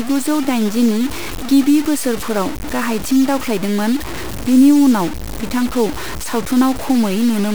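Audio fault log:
throughout, low bit depth without dither: the speech is coated in a coarse, grainy distortion that rises and falls with the signal, sitting only about 15 dB below it, so quieter passages turn gritty. The likely cause is heavy quantisation with truncation and no dither, fitting roughly a 4-bit depth.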